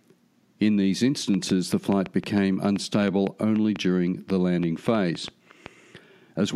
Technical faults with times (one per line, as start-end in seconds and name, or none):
1.34-5.67 train of clicks